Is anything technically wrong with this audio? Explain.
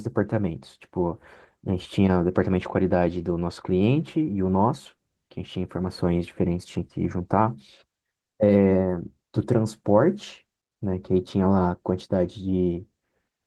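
No, nothing technically wrong stood out on listening to this speech clip.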